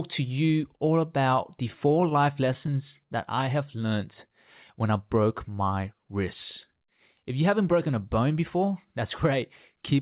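From 1.68 to 2.70 s, between "you all about the" and "that I have learned", the audio shows repeated stalls (stutter). The jitter buffer ran dry about nine times as packets arrived late, and each time the receiver stretched the preceding sound to cover the wait, adding roughly 90 ms in total, the longest fill 14 ms. Nothing is lost, but that second drags and catches unevenly. Throughout, the band stops at 4 kHz, consistent with G.711 A-law on the call path.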